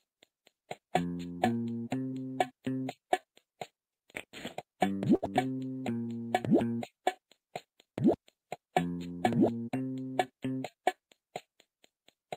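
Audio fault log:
5.15–5.24 s, short stall from a late packet: a packet arrived late and the jitter buffer ran dry, so the receiver stretched the last sound by about 71 ms before resuming where it left off. Nothing is lost, but the sound hangs slightly too long, with a faint buzz or dip.
10.02–10.75 s, jitter buffer speed-up: the buffer had built up more audio than it targets, so the receiver repeatedly cut short pitch-period slices, around 70 ms in all. Playback runs at about 109% speed with unchanged pitch, giving a hurried, pushed quality.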